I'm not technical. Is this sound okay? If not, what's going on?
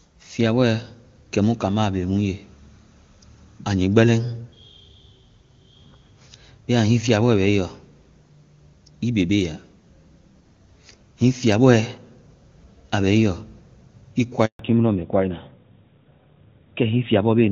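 No. At 14.45 s the speech suddenly drops out for a short moment, about 140 milliseconds, and comes back at 14.59 s. This is a handover gap: the phone passed the call from one network to another, and while it switched over, no sound got through. Whatever was said during that split second is gone for good.

Right after that break, from 14.59 s to the end, the voice sounds duller, flatter and rougher, as if heard through an old landline. That is a fallback to narrowband. Until then the call was carried in HD Voice, which sounds clear and full. After the switch it dropped to an older, lower-quality kind of call that throws away everything above 4 kHz, the crisp upper part that makes speech sound bright.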